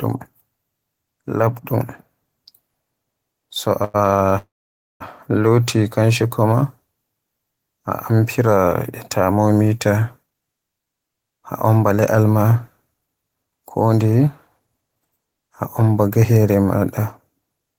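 Speech clip with three timing faults on the receiving end. At 3.84 s there's a short stall from a late packet: the audio hangs for about 0.1 s (it picks up again at 3.96 s) because the jitter buffer ran dry, so the receiver held the last sound too long until the packet turned up. Nothing gets dropped; the sound just resumes from where it paused, a touch later. Then from 4.38 to 5.02 s you get a call audio freeze: the last bit of sound carries on briefly and fades, then there's roughly half a second of dead silence before the audio resumes exactly where it left off. That's most likely packets stuck in transit long enough to drain the buffer completely. Again no content is lost, but about 0.6 s of extra delay has been pushed into the stream. The receiver claws that back later with a jitter buffer speed-up running from 10.22 to 16.25 s. Over those six seconds the speech plays at about 112% speed, with short slices a pitch period or so long trimmed out over and over, roughly 0.7 s in all. 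Because it cuts whole cycles rather than resampling, the pitch stays put, but the delivery sounds noticeably hurried until it settles back to normal pace.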